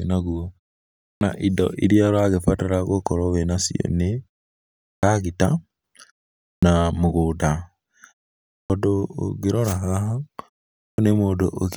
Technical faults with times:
1.06-1.21 clipped start after a pause
4.87-5.03 clipped start after a pause
6.48-6.63 clipped start after a pause
8.54-8.70 clipped start after a pause
10.83-10.98 clipped start after a pause

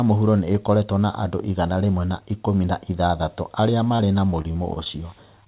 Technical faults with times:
3.96-4.87 repeated packet loss (robotic sound)
5.44-5.47 short stall from a late packet

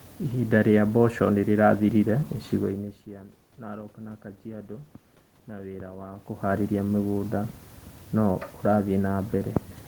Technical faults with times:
none

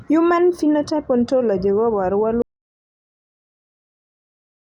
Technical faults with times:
2.42-4.62 audio dropout to silence

